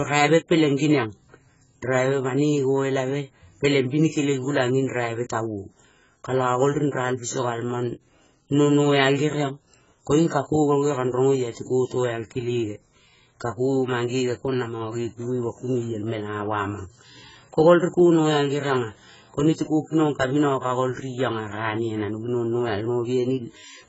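Speech throughout, carrying heavy AAC compression damage, likely from AAC-LC at a very low bitrate around 12 kbps: nothing above 7.7 kHz, so the spectrogram shows a flat ceiling with patchy holes below it. Sibilants sound fizzy and smeared, vowels dull and warbly.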